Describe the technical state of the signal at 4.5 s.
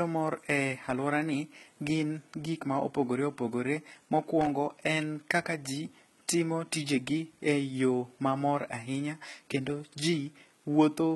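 Right around there you've got a short burst of loose connector crackle, from 4.41 to 4.47 s, ending just before 4.5 s. It sounds like a worn or dirty contact briefly making and breaking, chopping the signal into a quick, irregular scratchy crackle.

Underneath that, the whole speech track has the gritty, metallic treble you'd expect from heavy low-bitrate compression, likely HE-AAC at something like 16 kbps. The top end is rebuilt from copied lower bands, so sibilants go lispy, and nothing comes through above about 11.8 kHz.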